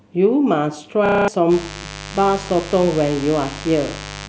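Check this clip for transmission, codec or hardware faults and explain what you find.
Two hardware faults show up in this speech clip.

From 1.06 to 1.28 s there's a system hang loop. The machine stalled while the sound card kept replaying the same 32 ms chunk, which fits a 512-sample buffer. It repeats seven times, a harsh 31.2 Hz stutter, and about a fifth of a second of real audio is lost.

From 1.48 s to the end there's mains buzz. Switching spikes twice per 50 Hz cycle leak in, maybe from a dimmer, rectifier or poor shielding, and spread harmonics up into the kilohertz range. You hear a steady raspy buzz about 15 dB under the speech.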